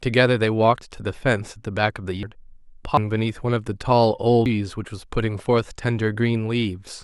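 Speech that jumps abruptly forward at 2.23, 2.97 and 4.46 s, each time skipping about a third of a second, likely dropped buffers (overrun).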